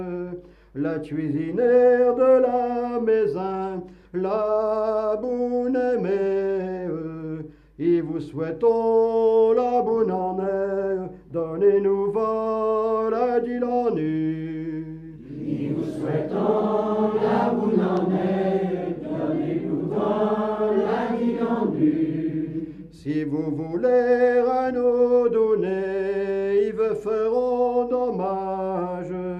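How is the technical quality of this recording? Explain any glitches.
One glitch stands out: a loud pop from 17.97 to 18.00 s, a single sharp pulse peaking a few decibels above the sound. It is likely a voltage transient, such as a switch, plug or static discharge, shaped by the downstream circuitry while the audio continues underneath.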